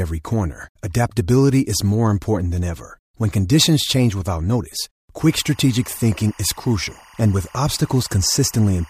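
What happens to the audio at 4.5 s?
Nothing goes wrong at 4.5 s; the audio is intact there, with no dropout, click, glitch or change in level or tone.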